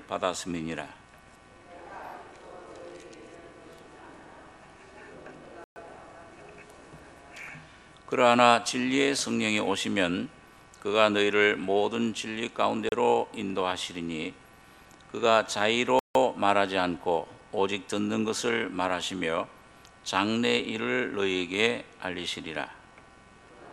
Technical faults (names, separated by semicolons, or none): block of digital silence